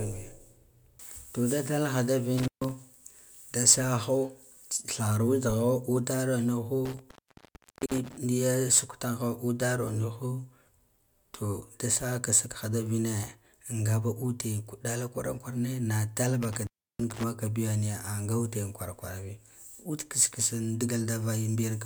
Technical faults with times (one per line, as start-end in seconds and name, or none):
2.38-2.71 intermittent contact
6.85-8.17 intermittent contact
16.43-17.23 intermittent contact